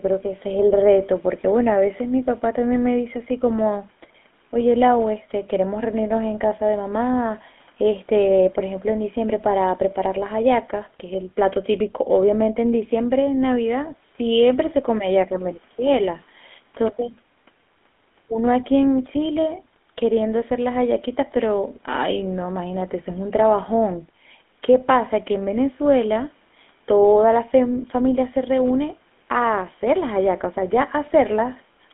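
From start to finish the speech carries GSM full-rate codec damage: a buzzy, gravelly roughness from coarse pulse excitation, which fits a 13 kbps coder. Bandwidth runs from 200 Hz to 3.5 kHz, so a spectrogram shows nothing above 3.5 kHz and smeared, grainy harmonics.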